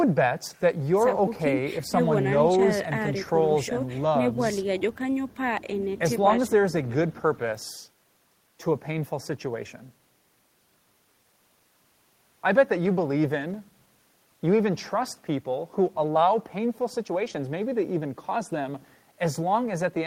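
No technical faults are audible anywhere in this speech recording.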